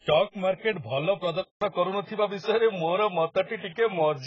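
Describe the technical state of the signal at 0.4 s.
At 0.4 s you're hearing the same heavy damage that runs through the whole clip: dull, smeared speech with nothing above 7.6 kHz and a warbling, fizzy texture. The likely cause is AAC compression, AAC-LC at a very low bitrate (it fits around 12 kbps), which lowers the cut-off and quantises the spectrum coarsely.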